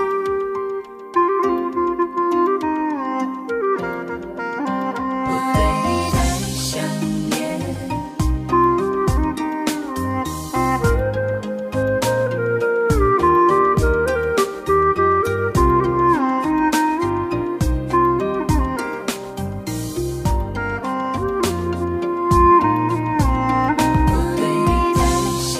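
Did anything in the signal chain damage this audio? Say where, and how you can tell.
No, no stage in the chain audibly damaged this audio.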